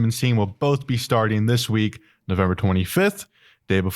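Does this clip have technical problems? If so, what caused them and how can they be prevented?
No, there are no technical problems to report here.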